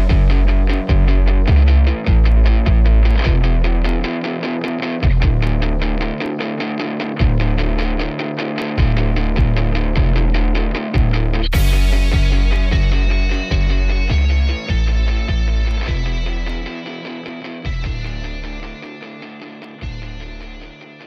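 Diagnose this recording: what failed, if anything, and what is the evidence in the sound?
A steady tick runs through the audio from about 0.74 s to 20.43 s, recurring every 0.79 s, roughly thirty of them in all, and it only shows up while there's signal. That regularity points to the driver or buffer stage, most likely clock drift buffer slips: two devices free-running on separate clocks about a thousand ppm apart, so the buffer creeps until a chunk of a few dozen samples gets dropped or repeated.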